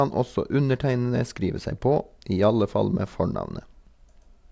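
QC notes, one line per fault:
No faults found on this speech clip.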